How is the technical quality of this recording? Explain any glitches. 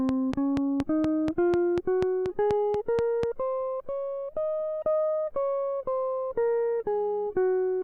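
There's one clear glitch: a train of clicks over the music from 0.09 s to 3.24 s. About fifteen sharp ticks arrive at a steady 4.1 per second, poking well above the music. The likely cause is interference from nearby gear or a faulty connection or power supply injecting near-identical pulses.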